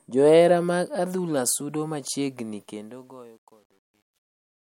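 Across the whole recording the speech carries the smeared, slightly watery texture of heavy MP3 compression, and nothing sounds above a sharp ceiling at 16.6 kHz. That combination points to low-bitrate audio saved at a high bitrate, likely a 64 kbit/s MP3 later re-encoded at 320 kbit/s. What gives it away is the mismatch: a genuine high-bitrate encode would reach higher and sound clean, whereas here the cut-off and artefacts of the first, starved encoding remain.

The fade-out ends at 4.74 s. From 2.59 s, though, it develops truncation distortion on a fade. As the level drops, the gain stage rounds each sample to a coarse grid with no dither, which fits about 10 bits, so the quiet waveform collapses into a few square steps. The result is worst from 3.1 s to the end, where the tail turns gritty. This differs from ordinary noise or codec hiss because the distortion follows the signal and worsens as the signal fades.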